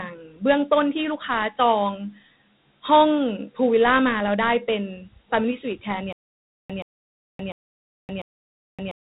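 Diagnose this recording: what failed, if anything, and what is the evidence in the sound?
The codec stage failed first, for the whole recording. The audio carries Dialogic VOX ADPCM damage: a gritty, granular hiss rides on the speech, and nothing reaches above about 3.9 kHz. That band edge fits 8,000 samples a second, and the grain fits 4-bit ADPCM at roughly 32 kbps. Each sample stores only a coarse step relative to the last, so the hiss tracks the speech level instead of sitting underneath it. That sets it apart from simple low-pass filtering or line noise.

The second fault is a stutter with silent gaps, starting at 6.13 s and running to the end. A 127 ms burst repeats four times, every 697 ms, with about 570 ms of digital silence between repeats. The likely cause is a player or stream buffer that kept stalling, replayed its last fragment on each retry, and then ran empty. A plain dropout would leave gaps without repeats, and a looping buffer would have no silence between repeats. 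The audio due in those gaps is gone.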